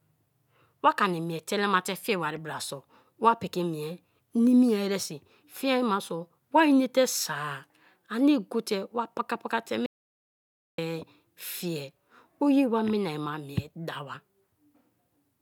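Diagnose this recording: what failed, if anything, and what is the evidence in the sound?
An audio dropout to silence cuts the speech from 9.86 s to 10.78 s, about 0.92 s of silence with no room tone. The likely cause is input lost at the capture stage, a disconnected device, failed link or mute, while recording continued writing silence.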